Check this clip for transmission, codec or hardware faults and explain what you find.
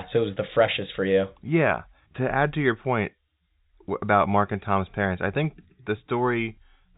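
No transmission, codec or hardware faults turn up in this speech clip. It carries the marks of a working G.711 telephone path: the sound stops at 4 kHz, and a faint quantisation noise follows the speech level at about 38 dB below it.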